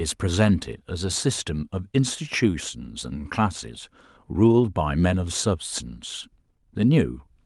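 Nothing here jumps out as a fault; the speech carries on steadily from the first moment to the last with no glitch worth pointing to.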